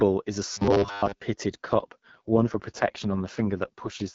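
From 0.53 to 1.22 s the speech turns into a rigid, metallic buzz fixed at 100 Hz. The cause is likely robotic sound from repeated short buffers, with a 10 ms stretch looped over most of that span while the real audio is skipped. Unlike a codec fault, the buzz holds a fixed rate rather than merely sounding rough.

From 1.65 s to 4.14 s comes an AMR rate drop. The AMR-WB codec, light-sounding at 12.65 kbit/s before this, falls to 6.6 kbit/s, so the speech grows raspy and synthetic. Unlike the buffer fault, there is no steady buzz, gap or change in bandwidth.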